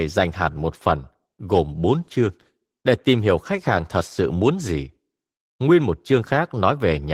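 Throughout the speech the sound is hoarse and faintly robotic. This is plainly audible Opus voice compression: a linear-prediction coder carries the lower band while a thin transform layer fills the highs, a bit-starved result consistent with about 16 kbps.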